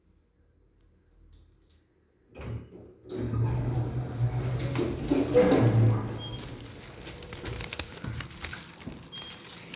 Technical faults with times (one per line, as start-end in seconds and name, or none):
none